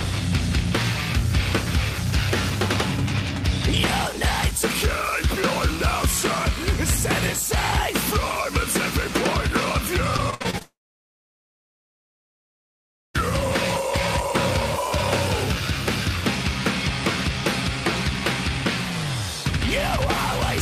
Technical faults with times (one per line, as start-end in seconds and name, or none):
2.07-3.73 drift correction step
6.07-7.87 drift correction step
10.16-10.62 repeated packet loss (robotic sound)
10.62-13.16 long network dropout
14.71-16.13 drift correction step